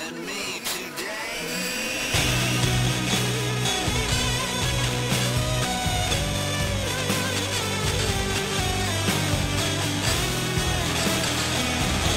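From start to finish the audio carries periodic clock jitter: interference modulating the converter's sample clock at around 3 kHz places sidebands about 3 kHz above and below every component, strongest on high frequencies, giving a rough, metallic edge that disappears whenever the sound falls silent.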